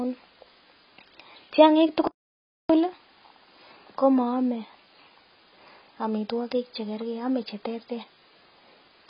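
Speech that sounds dull and smeared throughout, with nothing above 5.4 kHz and a warbling, fizzy edge on sibilants, which points to heavy AAC compression, likely AAC-LC at a bitrate around 16 kbps, where the encoder drops high bands and coarsely quantises the rest. From 2.07 to 2.70 s the sound cuts out abruptly for about 0.62 s and then resumes. This is a playback stall, where the player likely ran short of data or its thread was blocked and output went silent until it recovered.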